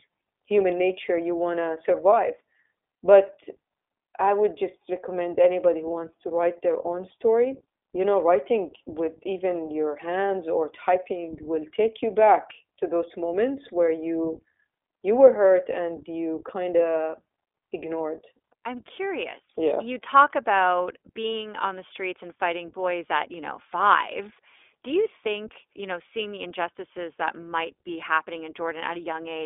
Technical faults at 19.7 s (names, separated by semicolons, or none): iLBC codec